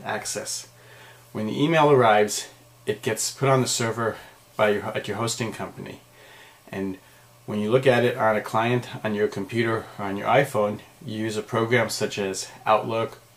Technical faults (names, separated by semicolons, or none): none